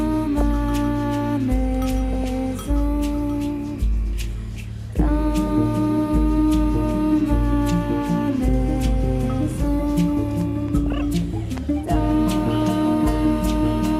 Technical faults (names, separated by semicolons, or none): DAB burbling